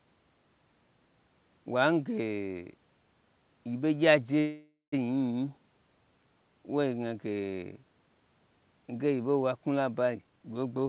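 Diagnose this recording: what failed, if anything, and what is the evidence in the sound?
At 4.40 s the sound stalls. The last sound carries on as a fading buzz, trailing into about 170 ms of silence, and the speech resumes at 4.94 s exactly where it stopped. Nothing is lost, but roughly half a second of filler has been inserted, pushing everything after it about 524 ms later. This is a call audio freeze at the network and jitter-buffer stage, likely caused by packets stalling in transit so the buffer ran dry while the receiver extended the last frame.

From 10.14 to 10.83 s the speech suddenly sounds hurried, playing at about 140% speed with its pitch unchanged. This is a jitter buffer speed-up. More audio was queued than the buffer's target. The receiver then cut many short pitch-period slices in succession, a few hundred milliseconds in total, to bring the delay back down. The call path's G.711 mu-law coding is audible throughout as a hard cut-off with nothing above 4 kHz.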